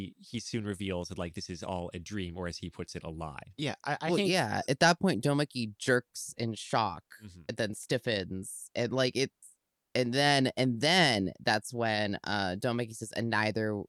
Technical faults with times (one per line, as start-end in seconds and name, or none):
none